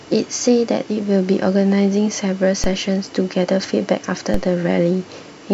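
At 2.64 s and 4.34 s, a DC step of about -10 dBFS shifts the zero line. Each lands as a low thump. The offset then drains away through a 5 Hz high-pass.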